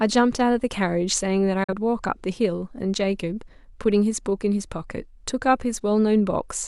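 A speech clip with a digital broadcast dropout at 1.64 to 1.73 s: an 8 ms fade into silence, roughly one lost frame, showing as a flat waveform gap and blank spectrogram column.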